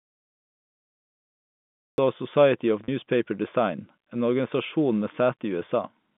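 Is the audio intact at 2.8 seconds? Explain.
No. Packet loss with pitch repetition spans 2.84 to 2.88 s: the last pitch period repeats to fill a 40 ms gap, heard as a brief buzzy hold rather than silence.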